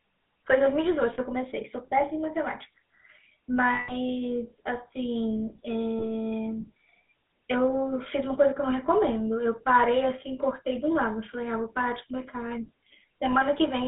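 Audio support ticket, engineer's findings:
GSM full-rate codec, throughout. Buzzy, gravelly roughness on all speech; band limited to roughly 200 Hz–3.7 kHz. Vocal-tract model driven by a sparse, regularly spaced pulse excitation, which fits 13 kbps full-rate coding. Codec damage plainly audible.

Lost GSM frames at 1.14–1.19 s (40 ms), 3.74–3.94 s (140 ms) and 5.98–6.04 s (20 ms). Brief rough, metallic ring where the last good frame's parameters are repeated. Longest gap fits about seven 20 ms frames.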